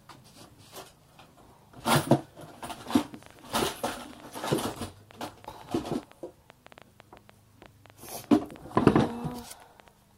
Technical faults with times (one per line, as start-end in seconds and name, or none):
2.99-9.89 train of clicks